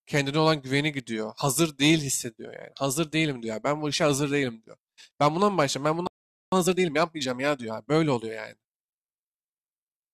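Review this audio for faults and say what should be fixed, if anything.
At 6.07 s the speech just drops out, and it stays silent until 6.52 s, so there's a gap of about 0.45 s right in mid-flow. That's a playback stall: the player most likely ran dry of buffered data, or its audio thread got held up, and the output had nothing to play until it caught up again. To prevent it, keep a deeper playback buffer and make sure the audio thread never waits on decoding or network work.

Right after the gap, from 6.52 s to 8.32 s, the speech runs hurried at 1.25 times normal speed while the pitch stays put. That's time-compressed catch-up: having fallen behind during the stall, the player trims out small slices and cross-fades across the joins to work off the backlog. To prevent it, fix the stall, or if catch-up is still needed, spread it over a longer stretch at a gentler rate.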